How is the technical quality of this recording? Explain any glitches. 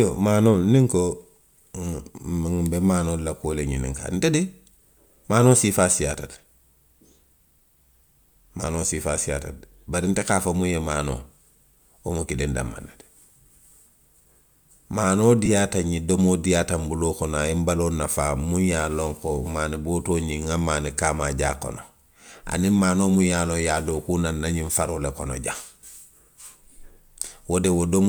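The recording has one glitch, a brief dropout from lost LE Audio frames between 15.45 and 15.48 s. About 15 ms of the Bluetooth stream went missing, which fits two lost frames. The LC3 decoder covered the gap by replaying the last spectrum with randomised signs, producing a short noisy smear in the speech. The lossy compression leaves only light codec traces.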